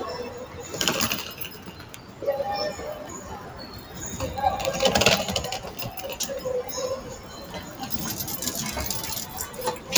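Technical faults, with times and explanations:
Throughout: noise suppressor applied to music or sounds. A suppressor built for speech is still running, treating steady parts of the sound as noise and pulling them down, so the level swings by around 10 dB and the sound pumps and thins as the gain chases it.
0.46–0.66 s, 1.49–2.22 s, 3.39–3.96 s, 7.15–7.81 s, 9.26–9.58 s, 9.76–9.91 s: sound cut by the noise suppressor. In each stretch the suppressor decides this material is noise and ducks it harder than the rest, with dips of about 5 to 7 dB.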